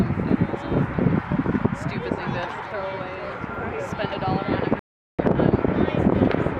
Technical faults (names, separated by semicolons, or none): rebuffering stall